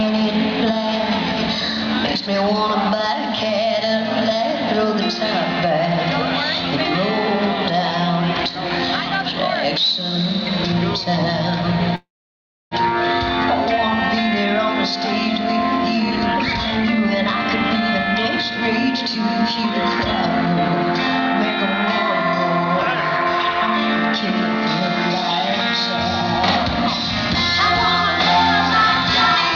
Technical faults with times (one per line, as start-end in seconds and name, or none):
11.95-12.74 call audio freeze
15.95-16.96 jitter buffer speed-up